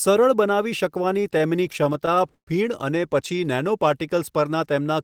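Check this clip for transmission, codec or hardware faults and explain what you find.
One transmission fault is present. From 1.09 to 2.49 s, just before "ફીણ અને", the speech drags and stutters through 13 brief stalls, the longest 123 ms. These are repeated stalls (stutter): late packets kept emptying the jitter buffer, so the receiver stretched the last sound, fading the longer holds, to fill 255 ms without losing anything.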